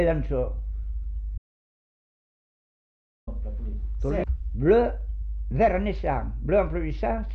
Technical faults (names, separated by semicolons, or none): audio dropout to silence